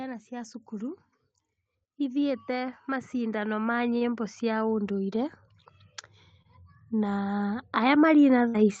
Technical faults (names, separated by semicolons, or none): automatic gain rising; short stall from a late packet; burst of packet loss